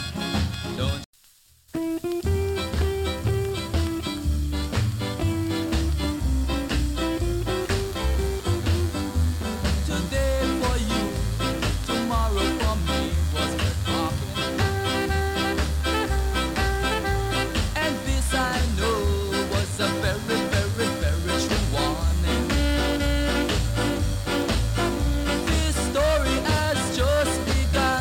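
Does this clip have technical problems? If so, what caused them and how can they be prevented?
Yes. From 7.61 s to the end there is a DECT cordless phone buzz. A nearby DECT handset or base pulses its radio every 10 ms. The audio circuit rectifies those bursts into a thin 100 Hz buzz with many harmonics, sitting roughly 20 dB below the sound. Keep DECT equipment well away from microphones and recorders.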